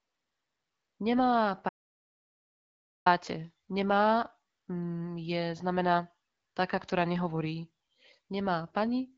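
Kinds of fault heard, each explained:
Audio dropout to silence: at 1.69 s the speech cuts off mid-flow and there's nothing, not even room tone, until it comes back abruptly at 3.06 s. That's about 1.37 s of pure silence, and whatever was said in that stretch is simply gone. The likely cause is the input being lost for a moment, through a device dropping out, a broken link or a stray mute, while the recorder kept writing empty samples.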